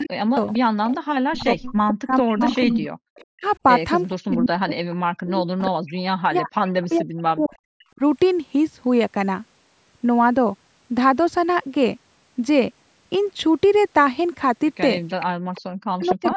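From 0.0 to 8.02 s the speech repeatedly dips and breaks up, falling by up to about 40 dB for roughly five seconds in total. This is likely speech suppressed in double talk, where the echo canceller turns down both sides at once.

Across the same span an echo leak adds a delayed copy of the voice trailing 455 ms behind, at 0.37–1.4, 2.28–3.25, 4.3–4.36, 5.26–6.01 and 6.92–7.84 s. It is loudest near 2.3 s, at about 5 dB below the speech, and otherwise sits about 15 to 25 dB down. The likely cause is loudspeaker pickup that the canceller did not fully remove.

The echo returns at 15.08–16.35 s. From 15.35 s to the end the speech is suppressed again for roughly 0.7 s.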